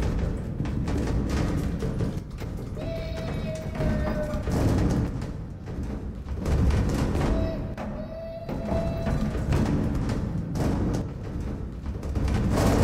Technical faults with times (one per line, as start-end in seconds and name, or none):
2.19-3.80 one channel drops out
5.07-6.42 one channel drops out
7.74-8.71 one channel drops out
11.01-12.15 one channel drops out